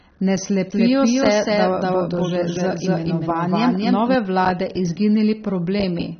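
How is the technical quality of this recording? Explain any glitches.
The quality's pretty compromised, with two separate problems stacked on top of each other.

First, across the whole clip there's AAC compression damage. Nothing gets through above about 6.3 kHz, so the speech sounds dull and boxy, and there's an audible swirly, fizzy texture on the sibilants and held sounds. That's the coder running out of bits: it drops the top band entirely and quantises what's left coarsely against its hearing model, leaving smeared patches in the spectrum. The amount of damage fits a low-bitrate AAC-LC encode, somewhere around 24 kbps.

Second, from 0.71 to 4.15 s there's a doubled audio track. A second full-band copy of the speech runs about a fifth of a second behind the first, at roughly the same level, so everything sounds stuttered and slapback-like. It's dry, with no room tail, and it cuts in and out abruptly at those two points. 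That's most likely a second capture path or an edit leaving two copies mixed out of step.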